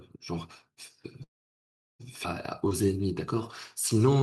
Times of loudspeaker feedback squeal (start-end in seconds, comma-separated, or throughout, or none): none